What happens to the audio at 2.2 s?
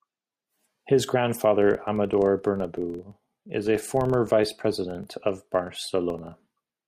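At 2.2 s you're inside a filter-restarted-on-every-block fault running from 1.62 s to the end: each block starts from zero state, giving a level-following buzz near 23.4 Hz, which fits 2048-sample blocks.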